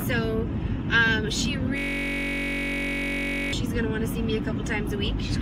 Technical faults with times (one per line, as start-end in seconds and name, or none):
1.78-3.53 system hang loop